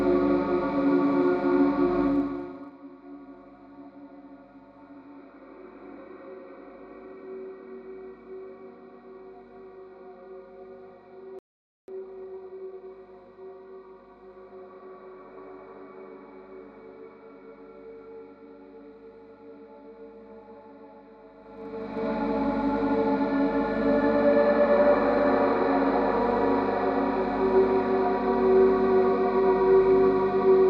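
From 2.04 to 2.76 s the level falls by about 20 dB with zipper noise. The gain moves in 1 dB steps at roughly thirty steps per second instead of following a continuous ramp. Each step is an abrupt jump in amplitude, which leaves a small discontinuity in the waveform. Strung together, these produce a fine ticking or buzzy zipping layered on top of the sound for as long as the fade is in motion.

At 11.39 s the sound cuts out mid-flow in a playback stall and stays silent for about 0.49 s, until 11.88 s. It is likely that the player ran short of buffered data or its output thread was held up, so nothing reached the output until it resumed.

Immediately after, from 11.88 to 12.86 s, comes time-compressed catch-up. The player works through its backlog at 1.5 times normal speed by dropping short segments and cross-fading across the joins. Pitch stays where it should be, but the sound comes across as hurried.

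Zipper noise returns from 21.38 to 22.10 s, this time on a rise of about 20 dB. The stepping is the same as before, 1 dB increments at roughly thirty per second, and the same ticking rides on the sound through the whole climb.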